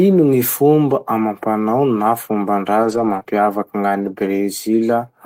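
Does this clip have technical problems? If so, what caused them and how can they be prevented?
Yes. There are two kinds of fault, both from packets going missing on the network.

The first is lost packets rebuilt from error correction, from 2.83 to 3.17 s and again from 4.03 to 4.09 s. Those stretches were played back from the low-bitrate copies that Opus tucks into the following packet. There's no gap, but the sound turns rougher and grainier. The first patch covers about 180 ms, which fits 9 separate 20 ms packets. The second covers about 40 ms. To prevent it, fix the lossy link, or give the stream more bitrate headroom so the error-correction copies are cleaner.

The second is short concealed packet loss, right after the first patch, from 3.19 to 3.23 s and from 3.23 to 3.27 s. Each time, 20 ms of audio never arrived in time. The receiver extrapolated from the last sound it had, carrying the pitch forward or filling with shaped noise, then blended back into the real signal. 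It comes across as a quick smear or wobble, and a brief consonant in there could be lost. To prevent it, cut packet loss on the network and use a jitter buffer deep enough to wait for late packets.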